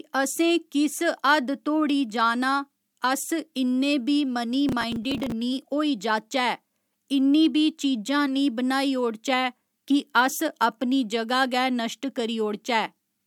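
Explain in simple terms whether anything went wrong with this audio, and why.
Between 4.69 and 5.32 s, a burst of gritty crackle rides on the speech. This is processor overload crackle. The processor fell behind on its tiny audio chunks, missing around twenty deadlines. Each miss replayed a scrap of old audio with hard edges.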